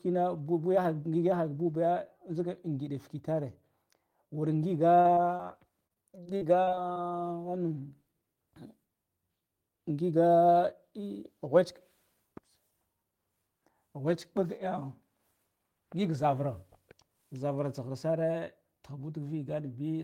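At 5.01, 5.15 and 5.37 s, three instances of short concealed packet loss appear, each a 20 to 40 ms hole patched by extending the preceding sound. Each is a brief isolated smear or wobble, separate and followed by normal flow, unlike the continuous chopping that comes next.

From 5.87 to 7.00 s, repeated packet loss (robotic sound) sets in. Gaps of up to 40 ms recur in quick succession and cover about a sixth of the span. The back-to-back patching gives a sustained choppy texture with pieces missing rather than isolated blips.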